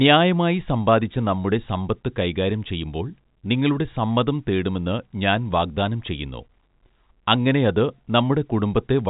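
No technical faults are present.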